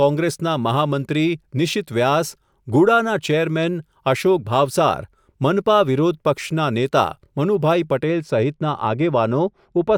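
A speech clip that turns dull and muffled from 8.03 s through to the end at 9.98 s, as if the top end has been pulled away, with sibilance and crispness sinking behind the lower voice band. This is de-emphasis applied wrongly: a treble-cut curve meant to reverse pre-emphasis has landed on audio that never carried any, or has been applied twice, so the response falls smoothly with frequency, reaching about 13 dB down at 10 kHz relative to 1 kHz.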